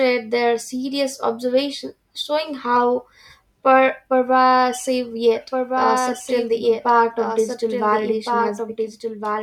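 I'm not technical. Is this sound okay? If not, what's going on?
No. From 5.35 s to the end there's a doubled audio track: a slightly quieter second copy trails about a second and a half behind, likely from a slower capture path.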